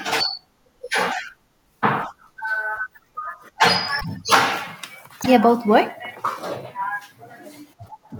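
At 4.00–4.05 s and 5.22–5.26 s, the speech jumps ahead, likely a broken MP3 bit reservoir decoding another frame's bytes.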